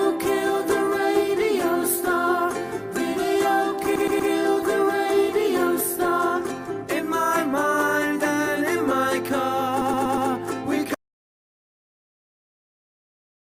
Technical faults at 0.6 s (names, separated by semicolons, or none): none